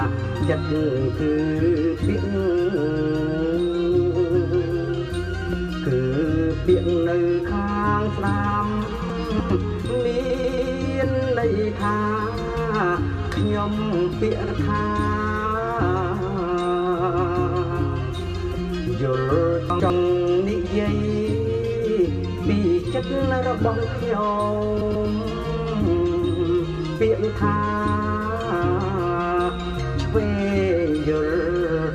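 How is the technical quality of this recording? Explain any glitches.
The recording has two kinds of glitch: brief jumbled moments and stutters.

Chunks out of order: at 9.1 to 9.5 s, the sound jumps and scrambles briefly. A 100 ms chunk arrived late and plays three chunks after its proper place. Nothing is missing, but the splices are abrupt. At 19.7 to 19.9 s, a milder version occurs, with one 100 ms chunk swapped with its neighbour.

Repeated frames: at 10.29 to 10.71 s, a 139 ms fragment plays three extra times in a row. This is a stutter, and it adds 418 ms. The same compressed frames were delivered or written more than once, which fits a run of about six frames. At 14.47 s, a 70 ms block repeats once. At 24.80 to 25.08 s, a 139 ms block plays twice more, adding about 0.28 s.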